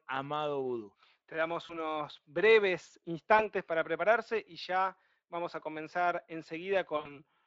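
VoIP packet loss concealed by the speech codec occurs at 1.65 to 1.79 s, 3.37 to 3.46 s just before "para prepararse y ya", and 6.97 to 7.16 s. Missing stretches of about 40, 20 and 80 ms are filled by extrapolating the previous pitch and filter with falling gain. The speech is stretched into a buzzy tone or coloured noise that fades, then stays weak briefly as frames rebuild through the lightly coloured Speex path.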